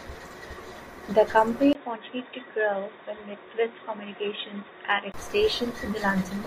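At 1.73 s a short gap of about 20 ms opens, and from there until 5.14 s the speech turns dull and boxy, with nothing above 3.8 kHz, a level a few decibels lower, and a faint new background noise well beneath the speech. This is likely an input switched to a poorer device. A simple bandwidth drop or filter would narrow the sound alone, but here the tone, level and noise floor all change together at a clean break.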